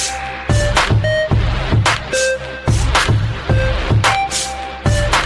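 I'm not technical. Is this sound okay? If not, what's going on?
Yes, nothing stood out as wrong when listening to it.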